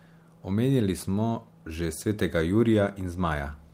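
Nothing to flag here, as the speech comes through with no technical faults to point to at any moment.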